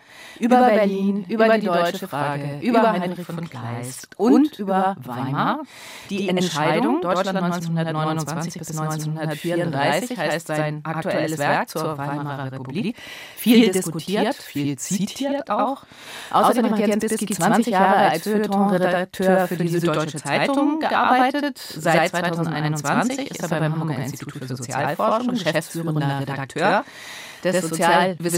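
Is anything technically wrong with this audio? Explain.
Yes. Throughout, there is channel delay (doubling): one channel arrives about 85 ms late, which fits a 4096-sample buffer, and both are summed to mono. Each event is heard twice at equal level as a distinct slap, not the hollow comb tone of a short offset or a decaying room tail.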